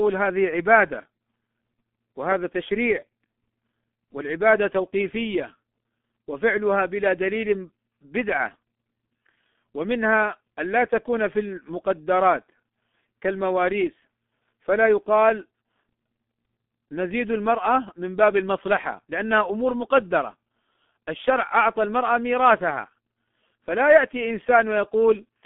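From start to finish the speech carries heavy G.723.1 codec damage, which fits a bitrate near 6 kbit/s. Sound is confined to 200 Hz to 3.5 kHz and the coarse, slowly updated voice model leaves it muffled and hoarse, with smeared consonants, unlike clean telephone band-limiting.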